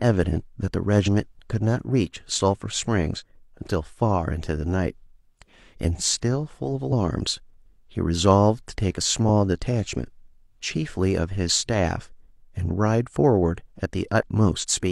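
Brief glitches break the speech at 1.03, 3.16, 6.88 and 14.59 s, each about 50 to 65 ms long. These come from damaged data in a compressed stream. The decoder misreads corrupted frames, loses sync and hunts for the next header.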